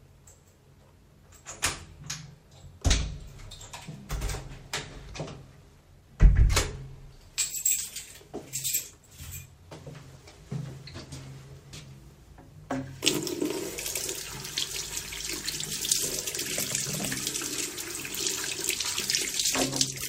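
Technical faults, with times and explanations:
5.09–5.11 s: skip ahead. About a second of sound was dropped with nothing filled in, so playback jumps straight forward and the latency falls by roughly a second. The waveform shows an abrupt splice, and the spectrogram a hard vertical seam where the two sides meet.
5.69–6.45 s, 8.91–9.71 s and 10.17–10.65 s: jitter buffer speed-up. The receiver trimmed excess buffered delay by cutting many short pitch-period pieces. The sound runs 111%, 124% and 111% fast at unchanged pitch, removing roughly 0.1, 0.2 and 0.07 s, and it sounds hurried. On a spectrogram, events look compressed in time while harmonic spacing stays the same. In the waveform, whole periods are repeatedly cut out at splices.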